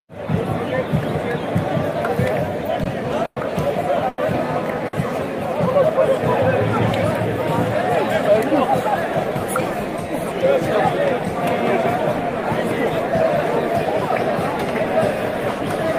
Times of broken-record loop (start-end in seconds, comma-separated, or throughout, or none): none